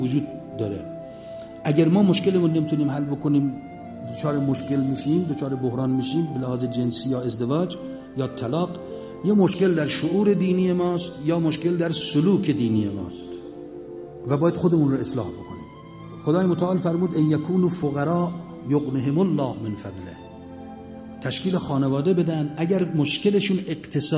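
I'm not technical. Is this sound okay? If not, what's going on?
Yes, no faults heard.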